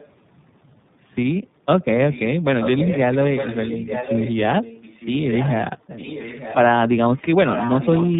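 A speech recording carrying tandem speech coding throughout: the sound passes through two low-rate speech codecs in a row, with a G.711-type link between them, ending in iLBC. Each coder re-models artefacts left by the previous one, so the roughness and warble are heavier than any single codec would give. The band stops near 3.8 kHz, as in ordinary narrowband telephony, but the compounded grittiness sets it apart from one clean narrowband pass. An echo leak appears from 2.6 to 4.36 s, 5.83 to 6.56 s, and 7.48 s to the end. A distinct copy of the speech returns about 906 ms late, around 10 dB below the direct sound in the first and last stretches and nearer 15 dB down in the middle one. It likely comes from a loudspeaker-fed microphone whose echo canceller left a residue. Unlike room reverberation, which smears sound continuously, this is a separate, nearly one-second-delayed repeat that comes and goes.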